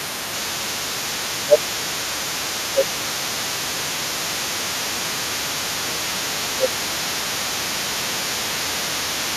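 The echo canceller in this speech recording was likely unable to separate the local talker from loudspeaker echo during double talk, so it turned both down. The result is speech suppressed in double talk from 0.0 to 0.8 s, 1.44 to 5.04 s, 5.81 to 6.73 s and 7.18 to 8.17 s, where the voice dips by around 15 dB at worst (nearer 10 dB in the last stretch). The canceller also likely left part of the loudspeaker signal in the microphone feed, so the other side's voice leaks through for the whole recording at roughly 15 dB below the main speech.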